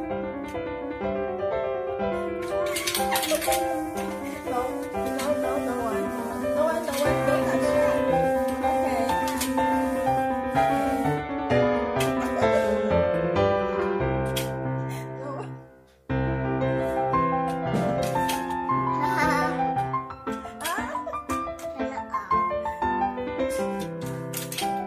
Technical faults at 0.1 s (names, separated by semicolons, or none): none